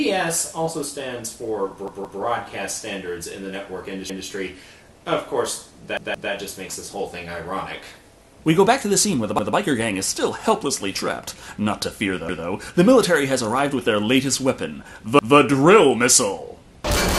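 A stuttering repeat, with hard joins, of a piece about 0.17 s long, heard at 1.88–2.22 s and 5.97–6.32 s (two extra plays each) and at 4.10–4.27, 9.39–9.56, 12.29–12.46 and 15.19–15.36 s (one extra play each). These are repeated buffers: new audio arrived late, so the last buffer, consistent with 8192 samples, played again.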